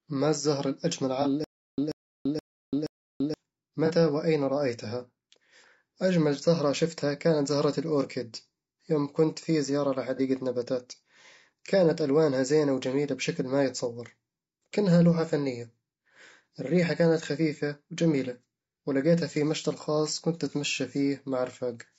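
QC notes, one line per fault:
Throughout: low-delay AAC compression. The speech is rough and grainy, with noise between harmonics and a dulled top band, likely from AAC-ELD's short frames near 32 kbps.
1.22–1.27 s (after "ما الزهرة الأجمل"), 3.86–3.91 s (just before "وأين رأيتها"), 10.16–10.20 s (after "يوم كنت في زيارة"): AAC frame loss with concealment. Each is a brief smeared, noisy patch that fits one lost frame of about 30 ms, refilled from the previous spectrum and never falling to silence.
1.44–3.34 s: stutter with silent gaps. The same 137 ms burst repeats four times, every 474 ms, separated by about 338 ms of digital silence. A stalled, retrying stream is the likely cause. The dead silence and regular repeats distinguish it from concealment patches.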